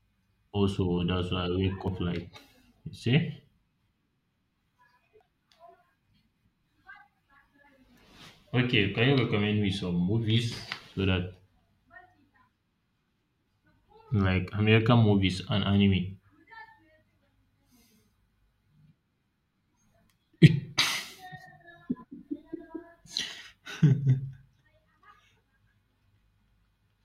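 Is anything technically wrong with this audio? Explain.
Yes. At 1.88 s, between "that's why I wake" and "like you see", and at 5.21, 20.48 and 23.17 s, the speech jumps ahead with no gap, skipping roughly 40 ms each time and about 100 ms at 5.21 s. This is likely a dropped buffer (overrun): samples were overwritten before being read, and the surrounding audio was spliced together.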